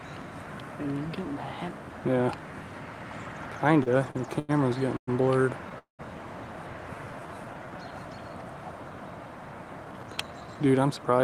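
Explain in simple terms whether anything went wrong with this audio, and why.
Repeated stalls (stutter) between 3.83 and 4.51 s: packets kept arriving late, so the receiver ran out of audio five times and stretched the last sound to cover the waits, longest 94 ms. Nothing is lost, but about a quarter of that stretch is filler, so it drags.

Call audio freeze at 4.97 s and again at 5.78 to 6.01 s: the sound stops and is filled for 107 ms, then 204 ms, fading into silence for part of each. The likely cause is packets held up in transit, leaving the buffer empty; the audio then resumes where it stopped, later than before.

Jitter buffer slow-down from 6.95 to 8.10 s: the receiver built up a reserve by repeating tiny slices of sound, adding 130 ms. The audio plays at about 89% speed without changing pitch, so sounds are drawn out.

Jitter buffer speed-up from 9.85 to 11.19 s: too much audio had piled up, so the receiver snipped out short pieces, roughly 150 ms in all. 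The audio runs at about 111% speed at the same pitch and sounds hurried.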